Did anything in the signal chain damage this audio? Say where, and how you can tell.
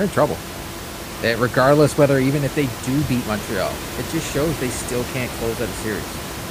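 No, nothing in the signal chain damaged this speech.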